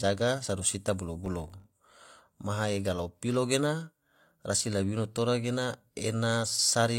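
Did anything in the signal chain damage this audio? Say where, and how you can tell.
Yes. From 1.26 to 2.1 s, between "sodo sita" and "maha ega lao", the speech carries a 50 Hz buzz from a filter restarted on every block in the processing stage. Each block starts the filter from a blank state, leaving a small transient every 20 ms. Although 50 Hz matches mains frequency, this is not hum: it swells and fades with the speech level and is confined to this span, where hum would stay steady.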